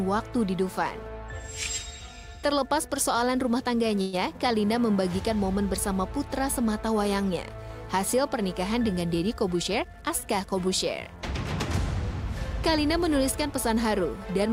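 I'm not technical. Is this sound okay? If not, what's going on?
No. A call audio freeze at 4.01 to 4.15 s stretches the last sound into a fading buzz or hiss for about 0.12 s, likely because delayed packets left the receiver waiting. Nothing is lost.

A jitter buffer speed-up from 8.98 to 10.69 s plays the sound about 7% faster at unchanged pitch, trimming roughly 0.15 s to catch up on built-up delay.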